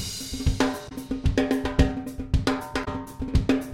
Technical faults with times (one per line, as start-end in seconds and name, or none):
0.85-0.92 damaged data in a compressed stream
2.81-2.88 damaged data in a compressed stream